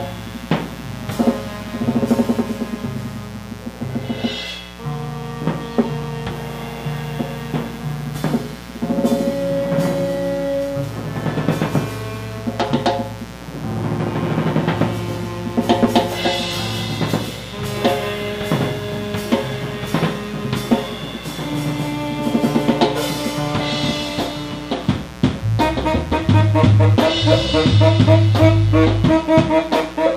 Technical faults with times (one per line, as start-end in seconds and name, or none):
0.00-30.16 mains buzz